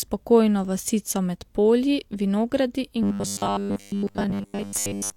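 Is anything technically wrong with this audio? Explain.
Yes. Robotic sound from repeated short buffers runs from 3.03 s to the end of the clip. New audio likely arrives too seldom, so playback repeats a roughly 10 ms slice for most of that stretch. This forces a rigid, metallic 100 Hz buzz onto the speech.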